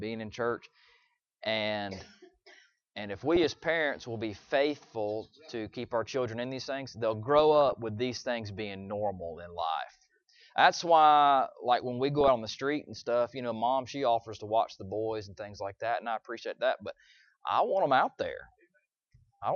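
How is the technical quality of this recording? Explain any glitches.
Technical quality is limited: the whole recording carries audible low-bitrate coding damage, and three short bursts of reception errors break through.

MP2 compression runs throughout. The top end sounds dull, and a granular, gurgling texture sits on the sound. This is likely MPEG Layer II at a low rate, consistent with about 80 kbps. Too few bits switch upper sub-bands off and coarsely quantise the rest.

DAB burbling occurs at 3.36–3.46 s, 7.39–7.73 s and 12.15–12.28 s, with the middle burst the longest. Bit errors on the order of a few tenths of a percent slipped past error correction and corrupted sub-band samples, producing short blips of noise in single sub-bands.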